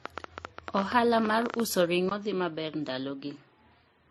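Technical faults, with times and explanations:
Throughout, transcoding between lossy codecs: the speech likely passed through several lossy encoders in turn, ending in AAC-LC. Each stage re-encoded the previous one's smearing and swirl, so the artefacts stack up, and nothing survives above about 12.1 kHz, the lowest cut-off in the chain.
0.06 to 1.61 s, train of clicks: roughly twenty sharp ticks at an uneven pace, averaging 12.3 per second, some around 10 dB above the speech. They sit on top of the sound and carry into the pauses, likely from electrical interference or a struggling interface.
2.09 s to the end, input switched to a poorer device: after a 20 ms gap the speech drops about 5 dB and turns duller, with nothing above 7.6 kHz and a new noise floor roughly 55 dB down. This likely reflects a change to a narrower-band microphone or headset profile.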